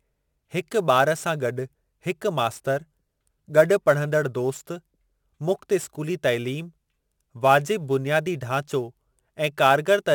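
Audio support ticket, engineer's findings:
Sample clock jitter, present throughout the speech. Hiss and grainy roughness riding on the signal. Worse on loud passages and sibilant, high-frequency sounds. Gone in the pauses. Probable component: ADC or DAC clock source. Mechanism: unstable clock timing shifts each sample early or late at random, so the error scales with waveform slope. Timing error sounds on the order of 10 µs. Resulting noise sits roughly 25 dB below the signal.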